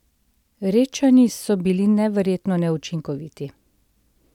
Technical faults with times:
none

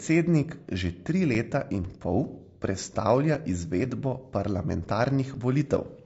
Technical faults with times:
0.00-6.05 low-delay AAC compression
1.34-5.35 periodic USB or driver dropouts
2.33-2.37 AAC frame loss with concealment

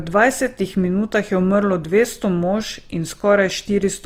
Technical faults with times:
0.00-4.06 Opus compression

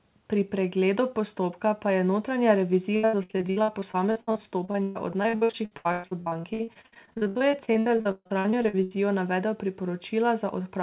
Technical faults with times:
2.96-8.96 repeated packet loss (robotic sound)

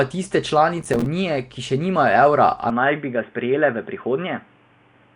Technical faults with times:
0.00-5.15 Nellymoser compression
0.82-1.06 processor overload crackle
2.70-5.15 input switched to a poorer device

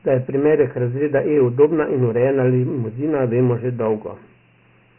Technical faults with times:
0.00-4.98 Dialogic VOX ADPCM

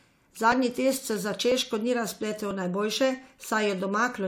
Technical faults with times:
1.52 audio missing between chunks
2.51 audio missing between chunks

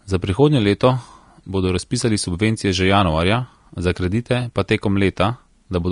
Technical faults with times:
0.00-5.92 Vorbis compression

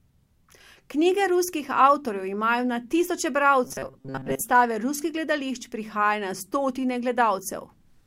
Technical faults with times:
3.64-4.41 robotic sound from repeated short buffers

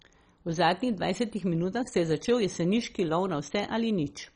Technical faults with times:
0.00-4.35 MP2 compression

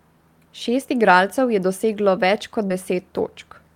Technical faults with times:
2.67-2.72 short concealed packet loss

